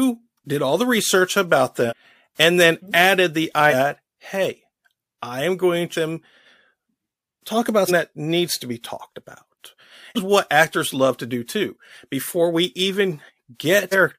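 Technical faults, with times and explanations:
1.88 to 1.93, 5.92 to 5.96, 7.87 to 7.91, 10.15 to 10.18 and 13.91 to 13.95 s, compressed frames skipped: the speech jumps ahead, losing roughly 0.7, 0.5, 0.3, 0.3 and 0.5 s, as whole frames of about 46 ms are dropped.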